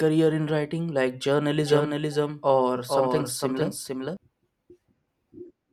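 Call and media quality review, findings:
Doubled audio track, 1.63–4.17 s: full-band second copy trailing about half a second, a few dB down, cuts in and out abruptly. Likely a slower capture path mixed in twice.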